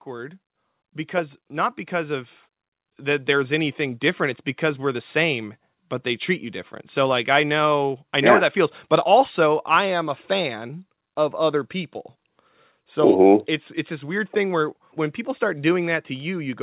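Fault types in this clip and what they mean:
automatic gain rising: The automatic gain control judged the incoming speech too quiet and raised its gain slowly, by about 11 dB between 0.05 and 5.15 s, so the voice and the background noise swell together across those five seconds.
automatic gain falling: The automatic gain control then judged the level too high and eased its gain back down by about 4 dB from 6.96 to 10.0 s, so the speech starts loud and gradually sinks, its background sinking along with it.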